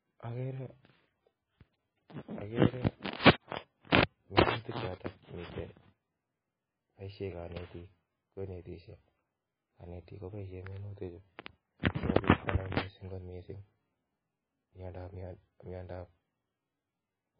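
From start to finish the speech carries heavy MP3 compression damage. Nothing reaches above 5 kHz, and the sibilants turn watery and swirly, with metallic chirps as weak frequency lines drop in and out between frames. That is the likely cause: an encoder so short of bits, fitting a bitrate around 14 kbps, that it discards the treble and thins the rest. A simple low-pass filter would dull the sound cleanly, without this frame-to-frame warble.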